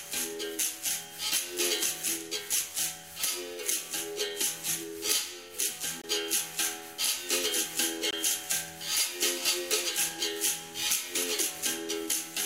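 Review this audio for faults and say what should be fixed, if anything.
Two blocks of digital silence, at 6.02–6.04 s and 8.11–8.13 s, each cut the sound for about 21 ms, which fits a 1024-sample buffer left unfilled in time. The sound drops to silence and returns abruptly, with no fade. The waveform shows a flat, near-silent stretch, and the spectrogram shows a blank vertical strip. Prevent it by giving the audio thread a larger buffer or higher priority so output is always filled before the deadline.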